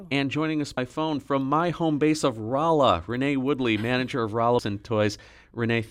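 It's a speech clip with two short bursts of damaged data in a compressed stream, at 0.75 to 0.78 s and again at 4.56 to 4.59 s, each lasting about 30 ms. A stretch of the encoded data is corrupt there, so the decoder can't make sense of those frames, loses sync, and has to hunt for the next valid frame header before clean audio resumes.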